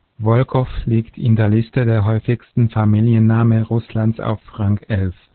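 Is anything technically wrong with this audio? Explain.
Yes. Throughout the speech there is heavy Opus voice compression. Nothing reaches above about 4.3 kHz, which points to the narrowband setting of the SILK speech coder at a very low rate, likely around 8 kbps. SILK predicts the voice's spectral envelope and codes the excitation only coarsely, so the voice sounds muffled, hoarse and faintly robotic. On a spectrogram the energy stops at a flat ceiling near 4.3 kHz, and the harmonics below it look smeared rather than crisp.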